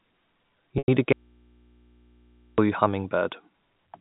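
Packet loss with pitch repetition occurs at 0.78 s to 0.88 s, where about 100 ms of speech goes missing, which fits five 20 ms packets. The receiver bridges it by repeating the last pitch period, so the sound briefly holds a buzzy, sustained tone before resuming.

An audio dropout to a faint residue follows from 1.13 s to 2.58 s, lasting about 1.45 s. The speech cuts off abruptly and the gap holds only mains hum, roughly 35 dB below the speech. This is likely a broken input connection while the path after it stayed live. The narrow telephone band of the G.711 coding stays audible throughout.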